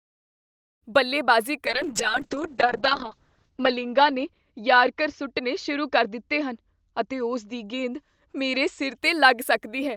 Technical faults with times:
1.66-9.03 call bitrate drop

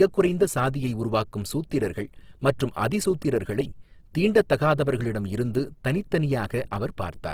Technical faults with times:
0.00-7.33 Opus compression

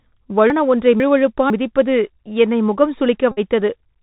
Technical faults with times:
0.00-4.02 Bluetooth CVSD headset codec
0.50-1.50 chunks out of order
3.31-3.39 Bluetooth headset packet repeated

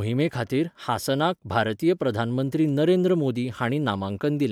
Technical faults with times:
none

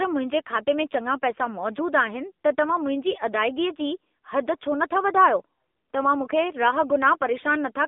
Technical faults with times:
0.00-7.88 AMR narrowband mobile codec

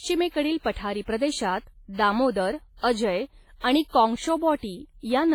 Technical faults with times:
0.00-5.34 WMA compression

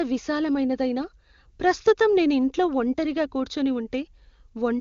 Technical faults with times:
none

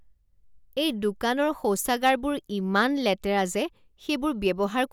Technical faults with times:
2.05-2.10 hard clipping

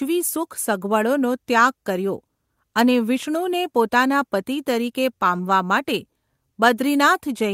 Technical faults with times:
none

